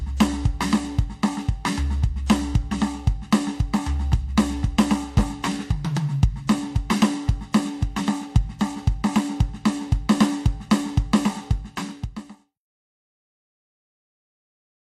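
No technical faults can be heard in this music. Near the end the level eases down from around 11 s and has faded out by 12.6 s, a smooth editorial fade with no click or hard edge.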